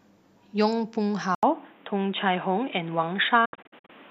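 At 1.35 s there's a gap of about 80 ms, and then the speech comes back dull and boxy, with nothing above 3.8 kHz, new background noise sitting well below the speech, and the level staying about the same. That's most likely the input switched to a poorer device, a narrower-band mic or headset profile taking over for the rest of the clip.

From 3.45 to 3.90 s you get a digital broadcast dropout. The receiver mutes whenever bad or missing frames arrive, so about 240 ms of audio vanishes in several short holes spread over roughly 430 ms. The longest is 72 ms, each with a quick 8 ms fade, which points to around ten lost frames.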